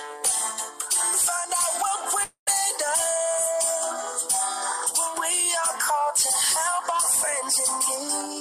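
At 2.23 s the sound breaks off and is replaced by a buzzy continuation of its last moment that fades over roughly 230 ms, leaving about 90 ms of near-silence before the audio resumes at 2.49 s with about 240 ms of material missing. This is most likely a long network dropout, with the receiver concealing the gap and then skipping ahead. On a spectrogram the fill looks like smeared, repeating bands that dim into an empty strip. The waveform shows a decaying envelope, then a flat line.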